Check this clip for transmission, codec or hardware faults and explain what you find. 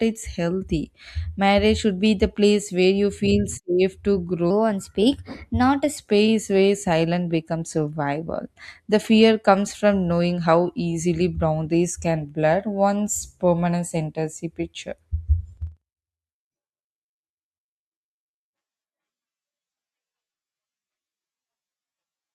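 One fault stands out. From 4.50 to 5.97 s there is a section at the wrong speed, likely from a clock mismatch: playing 1.12 times fast raises the speech about two semitones, high and hurried.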